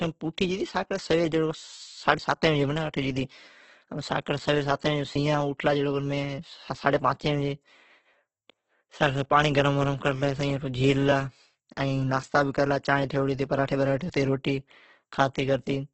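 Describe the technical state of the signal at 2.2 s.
Audio missing between chunks at 2.18 s: a piece of about 20 ms drops out and the two sides are spliced together with no silence in between, so the sound jumps forward abruptly, with a tiny skip. The likely cause is a recorder or processor working in blocks, here apparently 3 s long, that loses a sliver of signal while closing one block and opening the next.

Opus compression runs through this moment as well. The speech sounds grainy and rough, with a noisy, smeared texture where cleaner tones should be, and nothing above 8.2 kHz, so the top end sounds dull. This points to a music-mode (CELT) encoder starved of bits, at a rate that fits roughly 12 kbps. It fills the weak bands with folded or synthetic noise rather than leaving gaps.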